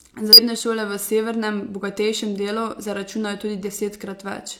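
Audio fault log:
0.33–0.39 s, compressed frames skipped: the speech jumps forward by roughly 150 ms just before "šole v severnem bogatejšem", as whole compressed frames went unplayed.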